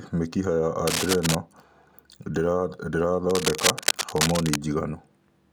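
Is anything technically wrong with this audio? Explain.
Yes. Cable scratch noise appears from 0.87 to 1.35 s and again from 3.3 to 4.56 s, likely from a worn cable or connector being moved so its contact resistance jumped about. Dense, ragged scratching and rustling bursts sit over the speech at roughly the same loudness as the speech.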